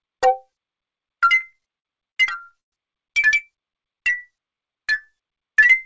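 From 1.36 to 2.74 s the audio stutters through repeated stalls. Packets arrived late, so the jitter buffer kept running dry. Each of thirteen short holds continues the last sound, the longest lasting 120 ms. Nothing is lost, but about a quarter of that span is filler.

From 3.77 to 5.07 s a jitter buffer slow-down stretches the audio. To rebuild its reserve, the receiver repeats single pitch periods. This adds about 204 ms and plays that stretch at 85% speed, so the sound drags without shifting in pitch.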